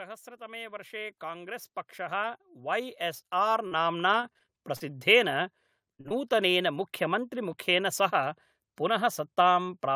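From 0.37 s to about 5.1 s, automatic gain rising lifts the level by roughly 18 dB. The gain control judged the input too quiet and kept raising it, so the voice and the room noise behind it swell together, slowly and evenly. That shared rise is what separates it from a talker simply speaking louder, where only the voice would grow and the background would stay put.

Near the end of that rise, from 4.21 to 4.82 s, comes repeated packet loss with a robotic sound. Five separate gaps, the longest 39 ms, remove about 120 ms of audio, and the receiver patches each by extending the sound just before it. Patched audio makes up about 18% of that stretch. Because the holes keep recurring, the voice turns choppy and robotic rather than breaking once, which sets it apart from a single burst.

A burst of packet loss follows at 5.94 to 6.01 s, with about 40 ms missing. The last sound is drawn out and faded before the speech picks up further along, with the part in between gone. 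Right after it, short concealed packet loss occurs at 6.01 to 6.06 s and again at 6.08 to 6.12 s, with about 40 ms and 20 ms lost. These fills are brief and blend straight back into the real audio. They come across as a quick smear or wobble, not a held buzz, and a short consonant can disappear inside one.

At 7.53 s there is a sudden jump forward in the sound, and the likely cause is a dropped buffer (overrun). A few milliseconds were overwritten before they could be read, and the two ends were joined directly. Unlike packet loss, nothing is filled in and no gap of silence appears. The audio simply skips.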